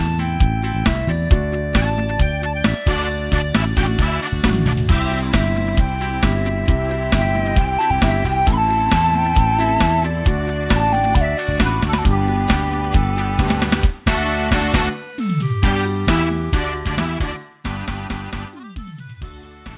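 Nothing in this clip stands out as a technical fault; the sound just runs along steadily with no glitches to point at.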